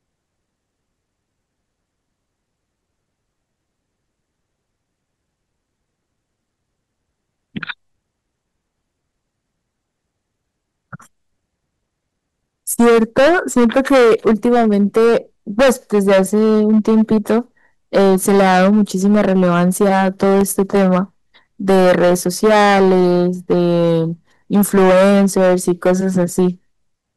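From 12.71 s the speech goes into hard clipping. It comes in five stretches: 12.71 to 15.17 s, 15.59 to 17.39 s, 17.95 to 20.99 s, 21.69 to 24.00 s, and 24.53 to 26.48 s. The signal is driven past what the stage can pass, by about 13 to 17 dB. The worst is about 17 dB, in the second stretch. Peaks are sliced flat. Those flat tops add high harmonics. Every loud syllable turns into harsh fuzz.

Inside the third clipped stretch, from 20.23 to 20.77 s, there are CD scratch ticks. Four short ticks fall in about half a second, roughly seven a second. The longest lasts about a millisecond. A scratch has ruined more data than error correction can rebuild on each turn of the disc. The player patches or mutes those samples once per revolution. The result is a brief, regular run of clicks over the distorted speech.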